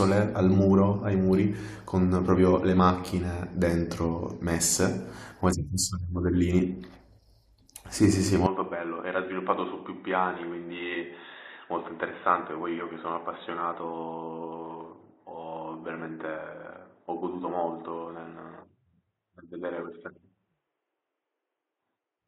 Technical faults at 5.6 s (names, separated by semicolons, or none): none